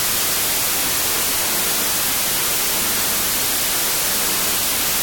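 From start to end, wrong sample width: 16-bit music is read as packed 24-bit, so mismatched bytes give loud noise with the music buried, playing 1.5 times fast.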